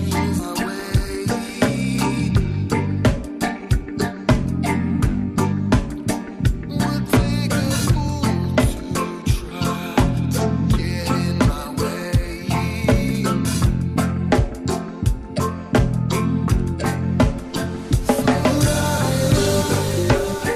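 At 0.39 s the audio skips ahead. About a second of sound is simply gone. Nothing fills the gap. The material before and after the jump is butted together almost directly, so the sound lurches forward with no pause. The cause is a stretch of audio being discarded, either lost in transit or dropped by the jitter buffer when it overflowed, while later audio was already queued. Playback resumes from that later audio.

From 0.98 s to 11.74 s there is a jitter buffer speed-up. The buffer was holding more audio than its target, so the receiver worked to shrink the delay. It cut out many tiny slices, each one or a few pitch periods long. Together they add up to about a third of a second. The sound runs at about 103% speed with no change in pitch.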